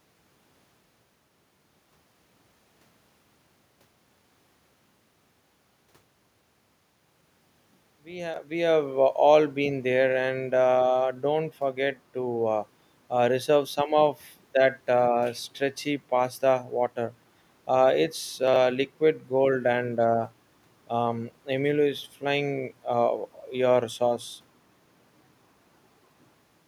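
At 8.34 to 8.38 s, chunks out of order: one chunk of about 21 ms plays one slot late. Order breaks, with hard joins, heard as a brief jumbled moment. At 18.48 to 18.56 s it recurs, three chunks late, sounding garbled.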